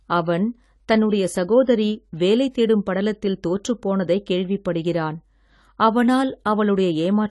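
Throughout, the speech sounds dull and smeared, with nothing above 11.5 kHz and a fizzy, warbling texture on sibilants. The likely cause is AAC compression, with an AAC-LC encoder at a bitrate that fits about 32 kbps cutting the top band and thinning the spectrum.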